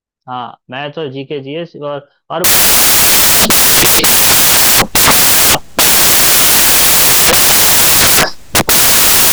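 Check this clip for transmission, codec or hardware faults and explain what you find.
One fault is present: from 2.44 s to the end of the clip, the speech is buried under loud, harsh broadband noise. These are samples built from the wrong bytes. The reader assembles each sample from misplaced or swapped bytes, so the rapidly fluctuating low-order bits land in the most significant position and become a dense, loud noise that swamps the original sound.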